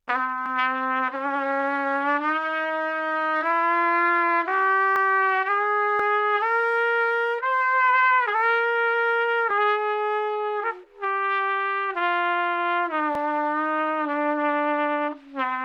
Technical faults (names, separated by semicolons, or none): dropped buffer (overrun)